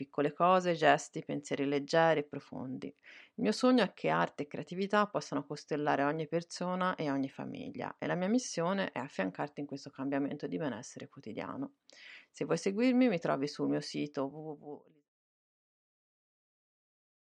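No technical faults can be heard in the speech. Near the end the level eases down in a smooth fade out, beginning at roughly 13.5 s and reaching silence at 15.1 s with no click or hard edge.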